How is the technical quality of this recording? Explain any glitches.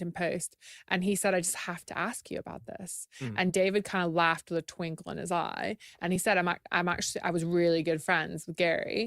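Two short dropouts affect the recording, both the same kind of fault: compressed frames skipped. They occur from 3.49 to 3.53 s and at 6.15 s. At each point the decoder did not play a compressed frame, either because it was missing or was rejected as damaged. The speech jumps ahead by about one 20 ms frame.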